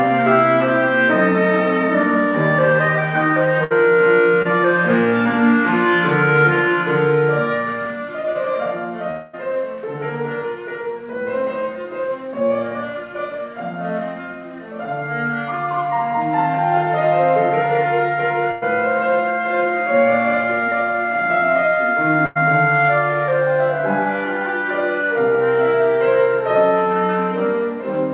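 The audio comes through a narrowband call path, with nothing above 4 kHz, which fits G.711 mu-law at 64 kbps. A burst of packet loss hits at 3.64 s, 18.51 s and 22.26 s. Each time, the last sound is stretched for about 60, 100 and 100 ms and faded down, then the audio jumps ahead with that stretch missing. Short concealed packet loss appears at 4.42 s and 8.33 s. About 20 ms is patched from the preceding sound each time, giving a brief smear or wobble before the real audio blends back. From 9.11 to 9.35 s, the sound is continued and fades for about 220 ms, then resumes further on without that stretch. This is likely a long network dropout, cut off before it reached silence.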